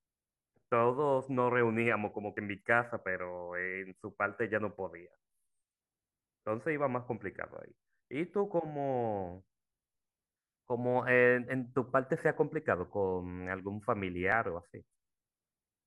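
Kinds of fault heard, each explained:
Overlap between stream segments: adjacent segments' timestamps overlap, so the player trims 25–30 ms of speech, causing audible skips at 2.37 and 14.32 s.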